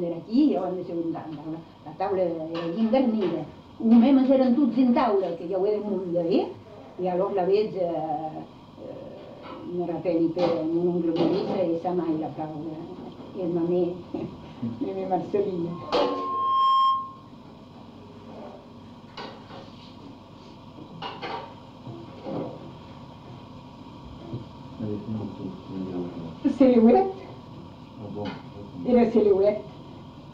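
At 15.70 s a loudspeaker feedback squeal begins. A microphone is picking up the loudspeaker it feeds, and at about 1.1 kHz the gain around that loop has risen above one, so the tone keeps reinforcing itself. It swells over roughly a second from a faint ring into a squeal, peaking about 5 dB above the rest of the audio, before it stops at 17.34 s.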